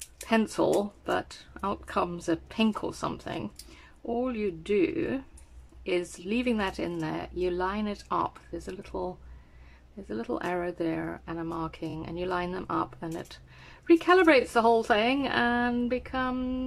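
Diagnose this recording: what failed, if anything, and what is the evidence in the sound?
The failure is in the compressed stream: repeated frames, where a run of coded frames was written or sent more than once and decoded again. A 46 ms block plays twice at 4.12 s, a 23 ms block three times at 11.89 s, and a 23 ms block twice at 14.41 s, each heard as a brief stutter. The 23 ms unit points to the codec's frame length. A waveform or spectrogram shows identical short blocks side by side, and the audio runs about 116 ms longer.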